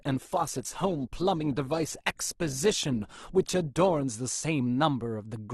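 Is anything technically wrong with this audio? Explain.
Yes. From the start until about 4.04 s the speech sounds dull and smeared, with the treble missing or replaced by a hissy, synthetic-sounding top end and obvious codec artefacts. At 4.04 s it suddenly becomes clearer and fuller, with no gap. This is an adaptive stream starting at a low bitrate. The player opened on a cheap version of the stream, one that fits Opus at around 16 kbit/s, and switched to a better one, consistent with about 64 kbit/s, once it had gauged the connection.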